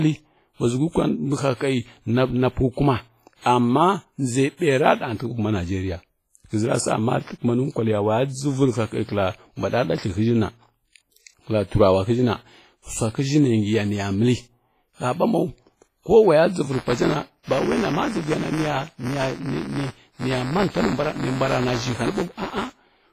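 Across the whole clip the speech has a ringing, washy quality with a hiss that swells and falls along with the signal, and nothing is heard above about 15.4 kHz. The damage is heavy, and the sound points to low-bitrate encoding, likely WMA compression at around 24 kbps: a transform codec working in long blocks smears its quantisation noise over tens of milliseconds and, short of bits, drops weaker spectral lines altogether, leaving the ringing, washy residue heard here.

At 4.57 to 4.61 s, just before "ra dəgha", and again at 9.04 to 9.09 s, a brief hiss runs ahead of a sharp onset, and the attack itself comes across softened and smeared. This is pre-echo. The encoder spread its noise evenly across a block in which the attack arrived late, so noise scaled for the loud part also filled the quiet moment before it, reaching back about 49 ms and 41 ms respectively.

From 16.72 s to the end, the sound picks up a continuous robotic buzz at 172 Hz that is present only while there is signal. 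This is buffer tearing. The program writing a ring buffer and the hardware reading it have drifted until they cross inside every period, so a small slice of each buffer, around a twentieth, carries audio from roughly 10 ms earlier, with hard joins on either side. The buzz rate fits a 256-sample buffer.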